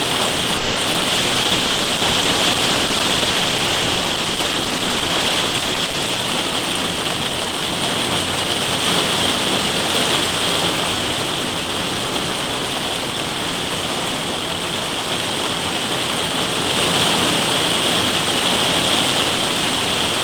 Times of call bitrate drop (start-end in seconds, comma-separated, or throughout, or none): 1.11-6.26